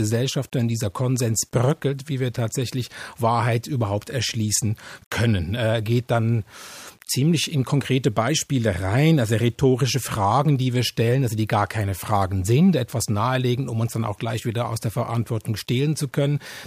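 A speech recording with grainy, gritty distortion that runs the whole length and rises and falls with the voice, which points to a likely cause of low bit depth without dither, consistent with about 9 bits and rounding. The error sits around 40 dB below the signal and is tied to it, so quiet passages roughen and the faintest tails sputter or cut to silence. Dithered reduction would instead leave a steady, even hiss.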